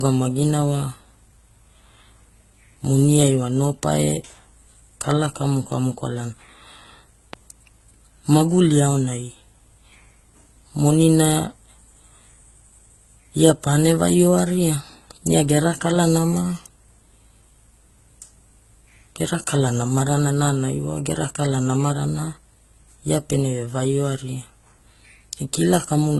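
From the start the speech has a layered, smeared quality, with nothing above about 12.1 kHz. That points to transcoding between lossy codecs, likely a low-rate HE-AAC pass, something near 16 kbit/s, later re-encoded to Opus at a more generous rate. The second encoder wastes its bits faithfully preserving the first one's swirly, watery artefacts and adds its own, so you hear both flavours stacked. The dull top end is the first stage's cut-off, which the second stage can't restore.

At 7.33 to 7.36 s there's a single loud pop sitting on top of the speech, roughly ten decibels above the surrounding level, while the talking carries straight on underneath. It's the kind of sharp, brief click you'd get when a sudden voltage step hits the line, likely from a plug, switch, static discharge or a driver hiccup, with the downstream circuitry shaping it into that short, hard pop.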